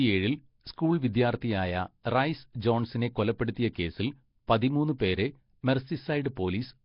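Throughout, the speech sounds hissy with a smeared, underwater quality, likely from Nellymoser compression; a spectrogram shows blotchy noise-filled bands and nothing above 5.3 kHz.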